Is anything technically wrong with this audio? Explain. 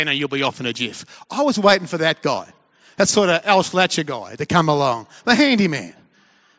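No, nothing is technically wrong with this audio.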